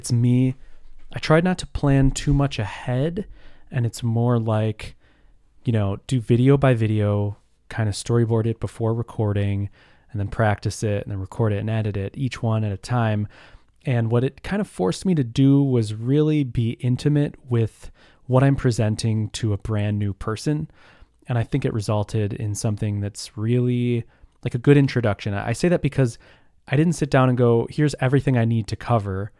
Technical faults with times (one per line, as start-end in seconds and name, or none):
none